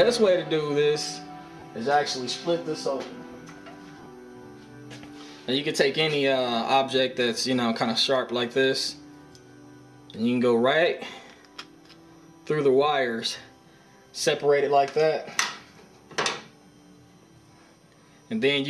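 Around 1.59 to 1.62 s, and again in scattered short bursts from 3.98 to 4.06 s, the sound briefly turns into a noisy smear. These are lost LE Audio frames: the LC3 decoder filled about 30 ms, then 40 ms, by replaying the last spectrum with randomised signs. Light lossy compression is also present.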